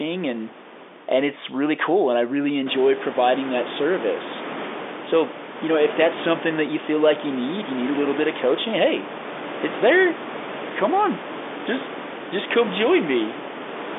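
Nothing in this recording stood out as a problem on listening, with the room's background noise rising by about 15 dB at roughly two and a half seconds and then staying about 11 dB under the speech, and the sound held to the narrow telephone band of G.711 coding, with nothing above about 3.8 kHz.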